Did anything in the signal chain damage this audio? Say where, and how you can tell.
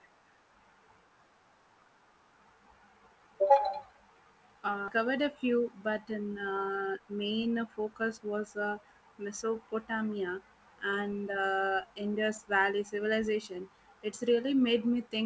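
Yes. At 4.88 s the audio shows a skip ahead in the network and jitter-buffer stage. Playback jumps forward with no silence and no filled-in audio, and the sound lands directly on "a few but the". Around 0.4 s of audio is missing, and the two sides are butted together. A packet-loss dropout would leave a gap or a smeared, concealed stretch. Here there is only an abrupt splice, which means audio already queued was thrown away.

From 6.73 to 8.33 s, after "a few but the", there is a jitter buffer speed-up in the same receive-side buffer. The sound runs at about 112% of its normal rate while the pitch stays put, which rules out a sample-rate mismatch, since that would raise the pitch along with the speed. The receiver trimmed short pitch-period pieces over and over, about a fifth of a second in total, to drain a buffer that had grown too deep. The G.722 call path, with nothing above 8 kHz, sits underneath both faults.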